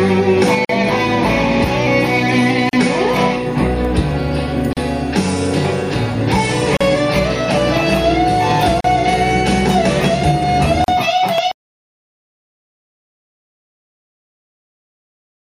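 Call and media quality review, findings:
Gap at a join of encoded pieces: silent dropouts at 0.65, 2.69, 4.73, 6.77, 8.81 and 10.84 s, regular 2 s spacing, first 45 ms, rest 38 ms. Segments encoded separately, joined untrimmed; encoder start delay and last-frame padding retained. Sound resumes where it stopped.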